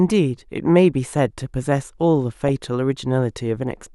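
From 2.49 s to 2.65 s the speech is overlaid with DAB burbling, a short stretch of noise blips. Weak reception let bit errors slip past the error correction into the MP2 audio data, with an error rate well under one percent. Corrupted samples put short blips of noise into individual sub-bands, which fits the eight frames being hit.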